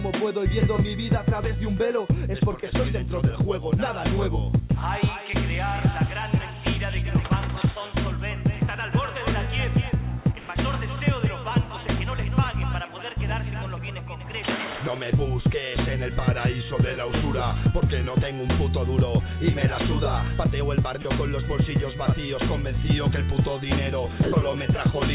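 Sound dropped by the voice detector, 10.40 to 10.49 s: for 90 ms the audio gives way to a flat, steady hiss and then returns. The sending side's voice activity detector likely judged this stretch to be background and stopped transmitting, so the receiver filled the gap with comfort noise. About 40 ms of real sound is lost before the detector triggers again. The audio passes through a narrow call band, with nothing above 4 kHz.

Drift correction step, 16.20 to 18.10 s: for almost two seconds the audio runs about 5.5 % slow and sits roughly 97 cents flat, close to a full semitone. Clock-matching software likely changed the playback rate in a single step to refill its buffer, which drags speed and pitch down together. The result is a sudden detuning and a slight sluggishness.

Sound dropped by the voice detector, 21.02 to 21.05 s and 24.23 to 24.32 s: the same effect occurs twice more. A 30 ms stretch and then a 90 ms stretch are lost entirely and replaced by steady comfort noise. 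Each one is heard as a short gap filled with even hiss before the sound resumes.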